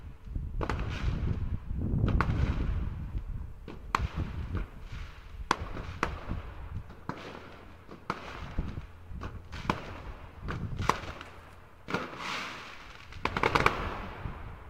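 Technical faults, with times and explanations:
4.05, 5.82, 6.89 and 13.24 s, compressed frames skipped: the audio jumps forward by roughly 70 ms, 300 ms, 100 ms and 30 ms, consistent with several whole frames going missing or being rejected by the decoder.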